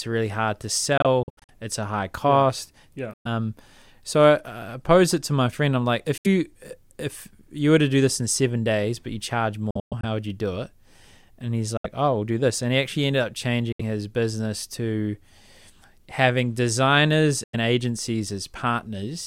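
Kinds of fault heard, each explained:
Bluetooth dropout: Audio packets likely reached the headphones too late and were discarded, so the output fell silent until good packets arrived, and the speech resumes further on, as if it had kept playing. Gaps fall at 0.98, 3.14, 6.18, 9.71, 11.77, 13.72 and 17.44 s, each losing between 70 and 230 ms of sound. Near 1.0 s and 9.7 s the holes are scattered, over about half and a third of a second.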